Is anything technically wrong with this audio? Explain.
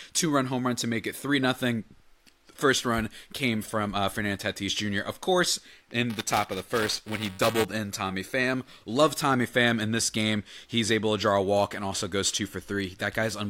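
Yes. From 6.10 to 7.65 s there is buffer tearing. Writer and reader slip, splicing in a sliver of older speech. This makes a robotic 345 Hz buzz, which fits a 128-sample buffer.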